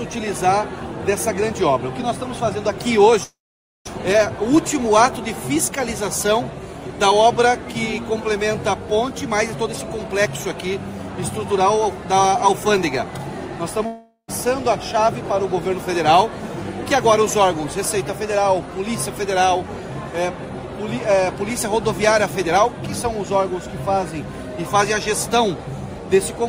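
At 3.23 s the sound stops and is replaced by concealment: the last audio carries on as a fading buzz for a fraction of a second, then gives way to near-silence until 3.89 s. This is a long network dropout, likely a gap in packet arrival during which about 400 ms of audio never played. When playback resumes, the receiver is holding roughly 200 ms more delay than before.

From 3.99 s to 5.70 s the audio runs about 4% fast, then from 6.31 s to 7.95 s about 7% fast. Pitch stays unchanged throughout, and the second stretch sounds hurried. This is jitter buffer speed-up: after the backlog from the dropout, the receiver trims short pitch-period pieces to drain the excess, roughly 70 ms in the first stretch and 100 ms in the second.

A second long network dropout runs from 13.86 s to 14.30 s. About 400 ms of audio is again lost. The concealment fade fills most of the gap and settles into only a short silence before the sound returns, with the delay shifted by only about 20 ms.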